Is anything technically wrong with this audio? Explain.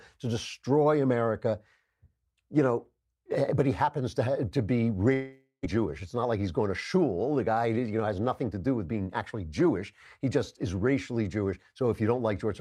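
Yes, two problems. From 5.13 to 5.67 s there's a long network dropout: the speech smears into a fading buzz, goes briefly silent, then resumes, likely with about 0.4 s lost. Right after, from 5.77 to 6.70 s, a jitter buffer speed-up trims short pitch-period chunks to shed the built-up delay, so the speech runs about 8% faster at unchanged pitch and sounds hurried.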